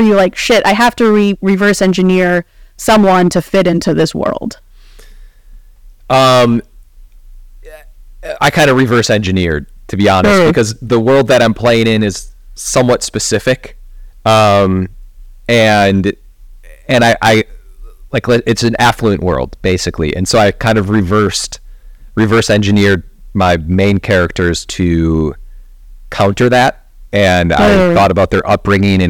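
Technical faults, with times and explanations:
Throughout, hard clipping: the speech is driven about 17 dB past what the signal path can carry, so every peak gets sliced off flat. That's heavy overload, with something like 7 percent of the samples sitting pinned at the ceiling, which is why it isn't just the odd crackle on loud bits. Those squared-off tops throw energy way up the spectrum, so you get a harsh, buzzy fuzz riding on pretty much every stressed syllable.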